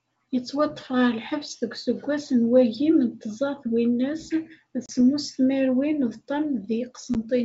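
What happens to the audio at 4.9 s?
Packet loss on an ADPCM call cuts about 30 ms, roughly three packets, from 4.86 to 4.91 s. The waveform shows a flat, hard-edged gap, and the spectrogram a blank vertical strip. Speech resumes with some distortion, because the decoder's predictor and step size have drifted from the sender's. It settles within tens of milliseconds.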